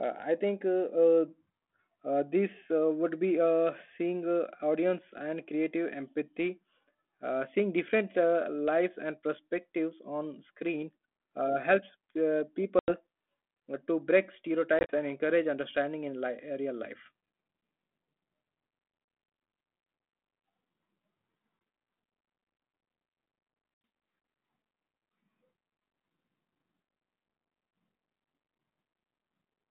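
At 12.79 s, 14.79 s, 21.59 s and 23.85 s, packet loss on an ADPCM call punches silent gaps into the 32 kbit/s G.726 stream. The gaps are a solid 90 ms, 60 ms scattered over 100 ms, 20 ms, and 90 ms in broken runs up to 70 ms. After each one, the decoder's predictor and step size are out of step with the sender's, so speech returns slightly distorted before settling. On a waveform these are flat, hard-edged holes, and a spectrogram shows blank vertical bands.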